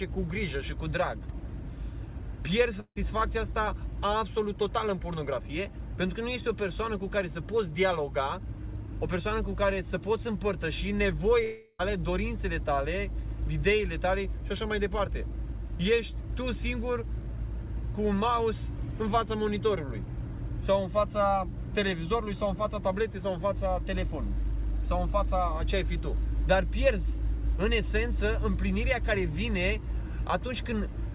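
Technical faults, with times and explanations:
2.80–2.99 s and 11.44–11.82 s, long network dropout: the sound breaks into a fading buzzy continuation, about 155 ms then a short silence at the first, about 355 ms tapering almost to nothing at the second, and resumes with material skipped. The likely cause is lost packets, with the receiver stretching the last sound to cover the gap. The spectrogram shows smeared, decaying bands below the 4 kHz narrowband ceiling, then a hard restart. The waveform shows a shrinking envelope and a brief flat stretch.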